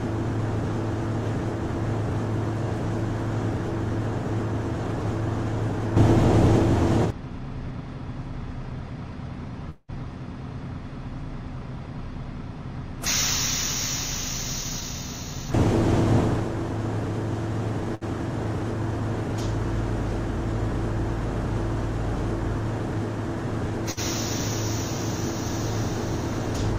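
At 9.69 to 9.91 s the sound stops moving forward and the last moment is drawn out as a fading buzz or hiss for about 190 ms, with the final 20 ms silent, before carrying on from the same point. This is a call audio freeze, likely from packets held up in transit that let the jitter buffer run dry. On a spectrogram the harmonics turn into flat horizontal smears that dim into a short blank strip. The waveform shows repeating cycles shrinking toward zero.

From 14.64 to 15.47 s the audio runs about 7% fast at unchanged pitch, sounding slightly rushed. This is a jitter buffer speed-up: the receiver trimmed its backlog by cutting roughly 70 ms in many slices of one or a few pitch periods. The spectrogram looks subtly compressed in time, and the waveform has tiny seams where cycles were removed.

Two short stalls from a late packet follow, at 17.95 to 18.03 s and at 23.91 to 23.99 s. Each time a packet arrived too late, and the receiver stretched the previous sound by 64 ms and then 57 ms before resuming. 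Each is heard as a briefly held sound with a slight buzz or dip. The spectrogram shows a short run of frozen, copied columns, and the waveform shows a near-identical repeated segment.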